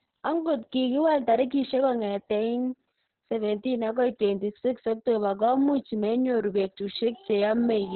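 Opus voice compression runs throughout this speech. The SILK coder, starved near 6 kbps, leaves nothing above 4.2 kHz. Speech sounds muffled, hoarse and robotic.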